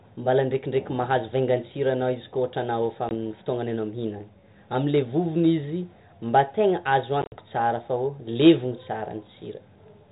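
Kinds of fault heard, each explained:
Packet loss on an ADPCM call: the call drops short chunks to hard-edged silence, about 20 ms near 3.1 s, then 80 ms scattered over 7.22–7.37 s. The decoder's predictor loses step, so speech resumes slightly distorted before settling.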